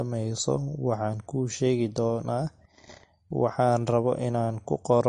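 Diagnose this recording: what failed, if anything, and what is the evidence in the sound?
Throughout the speech there is a watery, swirling texture, with metallic chirping on s sounds and consonant attacks that smear rather than snap. Nothing is present above about 10.6 kHz, a hard ceiling rather than a gradual roll-off. The stage is the codec, most likely MP3 compression at a low bitrate, which fits something near 40 kbps. Short of bits, the encoder cuts the treble at a fixed point and drops weak frequency lines that flicker on and off between frames, producing the swirl.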